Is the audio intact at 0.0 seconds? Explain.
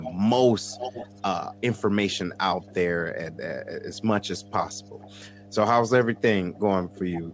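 No. A steady low 50 Hz tone sits about 20 dB below the speech and runs under the audio from the very start. This is mains hum: a ground loop or a nearby transformer has coupled the power line into the signal path.

From 0.03 to 0.14 s, a faint copy of the voice arrives 470 ms late, about 10 dB below the speech. This echo leak is likely from a far end on loudspeaker whose echo canceller let some of its microphone pickup return.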